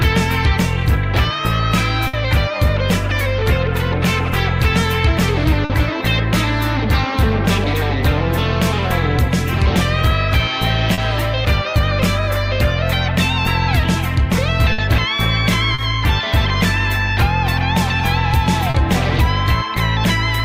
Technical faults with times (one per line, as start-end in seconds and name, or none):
2.07-2.16 burst of packet loss
5.65-5.73 burst of packet loss
10.94-11.01 short concealed packet loss
14.72-14.81 burst of packet loss
15.74-15.81 short concealed packet loss
18.70-18.77 short concealed packet loss